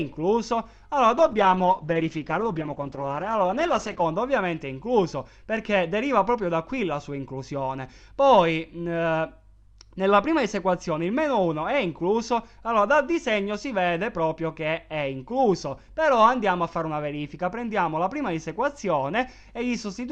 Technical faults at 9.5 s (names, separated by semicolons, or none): none